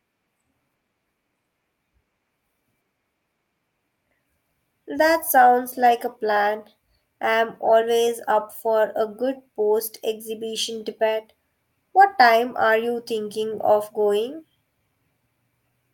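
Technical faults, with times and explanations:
No technical faults are audible in this speech recording.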